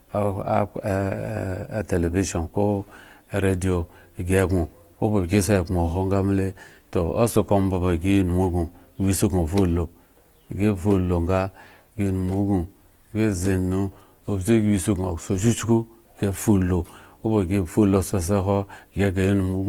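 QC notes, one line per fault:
Throughout: Opus compression, likely in its CELT music mode. The speech is plainly grainy, rough and noisy rather than swirly, because band energies are kept while starved bands are filled with folded or noise content. Bandwidth stays full to 20.2 kHz, which fits roughly 24 kbps.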